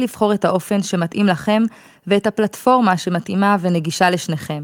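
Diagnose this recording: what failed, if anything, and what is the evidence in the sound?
Nothing failed in this recording. There is no evidence in the sound of a problem at any stage of the chain.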